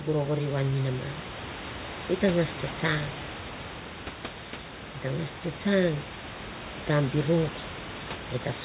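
The speech carries no technical faults: room noise sits about 14 dB below the voice as part of the recording, and the band stops at 4 kHz with the usual coding noise of a call link, which fits a G.711 mu-law codec at 64 kbps.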